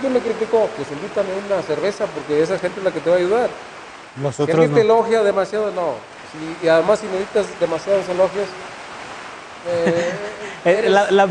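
Nothing here sounds technically wrong, with no dropouts, glitches or other faults turning up anywhere in the audio.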